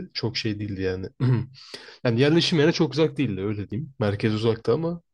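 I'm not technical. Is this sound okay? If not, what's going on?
No. The speech jumps slightly at 1.74 and 3.72 seconds, where a tiny sliver of sound, about a fiftieth of a second, vanishes. That's audio missing between chunks, likely the recorder dropping a bit each time it started a new two-second piece.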